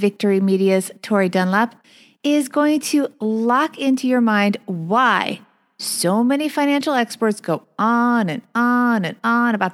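Listening through the speech recording, nothing technical stood out as wrong at any point.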